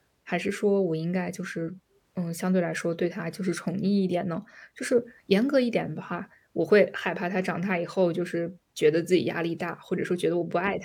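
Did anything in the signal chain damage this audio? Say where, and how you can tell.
No, nothing in this speech recording stood out on listening as damage from any stage of the signal chain.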